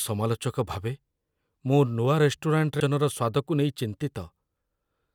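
At 2.8 s the speech hits a CD skip: the laser jumped to another turn of the disc's spiral after a knock or flaw, leaving a very brief mute and tick. Unlike a digital dropout, the audio resumes displaced in time rather than continuing where it stopped.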